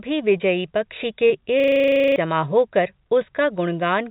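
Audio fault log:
0.38–0.42 s and 1.28–1.32 s, short concealed packet loss: a brief smear just before "पक्षी के" and again just after it. About 20 ms of the call arrived too late both times. The receiver extended the preceding sound across each gap, then blended back into the real signal.
1.6–2.16 s, system hang loop: a hard, rattling stutter just after "पक्षी के". One 40 ms slice repeats 14 times at 25 Hz. This happens when the system freezes while the audio hardware keeps replaying its ring buffer, and roughly half a second of real audio is lost.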